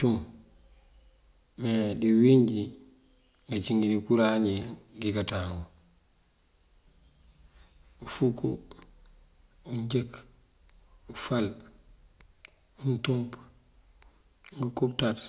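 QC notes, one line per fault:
No faults heard anywhere in the speech.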